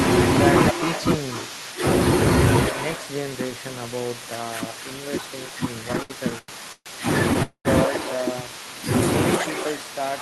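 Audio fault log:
Throughout: echo with no canceller. Every phrase is trailed about a third of a second later by a copy about 11 dB quieter and thinner. It is the far end's loudspeaker feeding its microphone, unlike room reverberation, which smears continuously rather than repeating as a distinct delayed copy.
5.83 to 6.89 s: repeated stalls (stutter). The jitter buffer ran dry eight times in about a second, each gap filled by stretching the last sound, the longest about 134 ms. Roughly a third of the span is concealment, so it drags and stutters while nothing is lost, unlike dropouts.
7.43 to 7.68 s: call audio freeze. A single hold of about 220 ms, likely from packets delayed in transit. The last sound is continued as a fading buzz or hiss that sinks into about 90 ms of silence, then resumes where it stopped. It is one longer pause, not a stutter.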